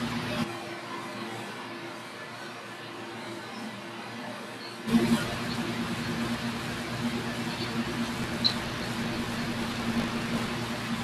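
From 0.46 to 4.86 s the close microphone's signal was likely lost, leaving only a distant microphone. The speech turns hollow and roomy with thinner bass, drops by about 10 dB, and carries background noise only about 25 dB below it, switching abruptly at both ends.

From 8.16 to 10.50 s the writer and reader of the playback ring buffer slip and cross each period, causing buffer tearing. A small slice of each 20 ms period repeats audio about 40 ms old, producing a 50 Hz robotic buzz over the speech.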